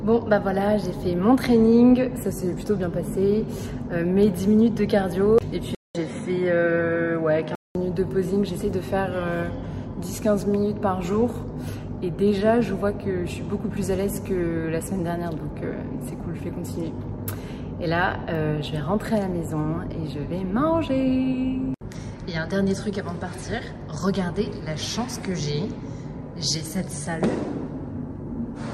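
At 5.75 s a gap of about 200 ms opens, and the sound comes back duller, with nothing above 10.5 kHz and a faint new background hiss far below the signal, though the loudness barely changes. At 7.75 s the full brightness returns. The likely cause is an input switched to a poorer device partway through the recording: the substitute input passes a narrower band and carries its own noise floor until the original returns.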